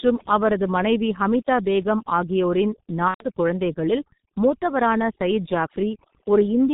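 Overdone noise removal runs through the whole speech clip. The suppressor was set too hard, so individual frequency bands near its noise estimate are pulled down or shut off along with the softer parts of the speech. Gaps fall to near silence with glittering specks.

The G.723.1 codec also runs throughout, with heavy damage. Its 30 ms frames and slow-moving voice model blur consonants, and nothing above 4 kHz survives. The result is muffled and hoarse, which fits a bitrate of about 6 kbit/s.

VoIP packet loss concealed by the speech codec occurs from 3.08 to 3.26 s, after "மனைவி ஹமிதா பேகம் ஆகியோரின்" and before "குழந்தைகளில் மூத்தவரான சயீத்". About 120 ms is missing, which fits four lost 30 ms frames. The decoder extends its last pitch and filter with falling gain and mutes from the third lost frame, and the speech stays weak briefly afterward.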